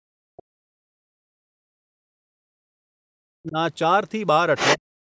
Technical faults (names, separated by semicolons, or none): speech suppressed in double talk; other side's voice leaking through